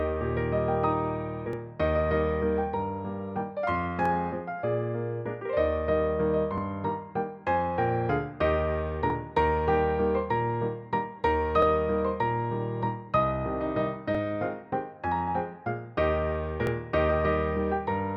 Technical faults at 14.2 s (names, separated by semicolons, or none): overlapping chunks